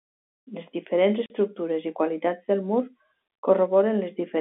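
Packet loss filled with silence breaks the speech at 1.26–1.30 s and again at 3.28–3.30 s. Missing packets were replaced by silence, leaving 40 ms and 20 ms gaps, which fits two lost 20 ms packets and one, with hard edges.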